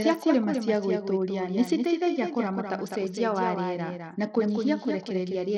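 From the first syllable to the end, the speech carries a second copy of itself trailing roughly a fifth of a second behind and only a little quieter. That's a doubled audio track, likely from the same signal being captured again through a slower path, or an edit leaving two copies out of step. The late copy is full-band and bone dry, with no decay or room colour, so it sounds like a flat, slapback echo on every word.

Running the whole way through as well is Bluetooth SBC compression damage, and it's plainly audible. The codec splits the sound into a handful of wide sub-bands and hands out bits crudely, so the quieter upper bands get starved. The treble sounds thin and unsteady, with a gritty, aliased edge on top. Nothing survives above 18.7 kHz, and the overall grit fits a low bitrate somewhere around 80 kbps.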